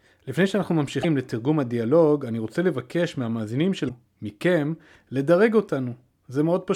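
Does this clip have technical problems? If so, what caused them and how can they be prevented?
Yes, there's damaged data in a compressed stream, showing up twice as short glitches in the speech, from 1.00 to 1.05 s and from 3.85 to 3.90 s. Each lasts about 50 ms. Some of the encoded bytes there got lost or mangled, so the decoder couldn't read those frames properly and had to resync on the next good frame header. To prevent it, use a transport or storage path with checksums, retransmission or error correction so that corrupted frames are caught and never decoded.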